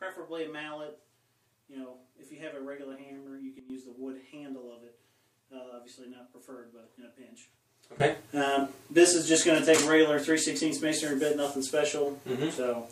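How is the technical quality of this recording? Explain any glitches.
Two sudden gain jumps mar the recording. The first sudden gain jump runs from 3.59 to 3.70 s, where the level falls by about 12 dB and then returns. The second starts at 8.00 s and lifts everything by about 16 dB until the end. The likely cause is a digital gain change applied between adjacent samples with no ramp, so the sound and its background noise step in level together, abruptly rather than smoothly.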